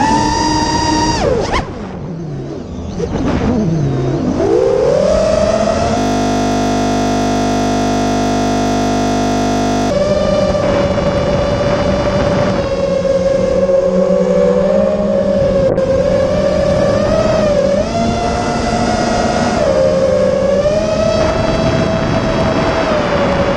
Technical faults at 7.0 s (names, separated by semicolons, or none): system hang loop